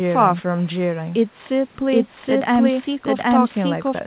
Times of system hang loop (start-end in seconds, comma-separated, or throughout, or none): none